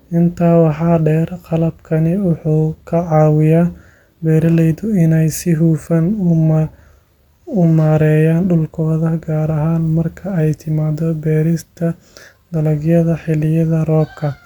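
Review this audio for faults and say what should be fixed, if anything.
No faults can be heard anywhere in this speech recording. Nothing in it needs to be fixed.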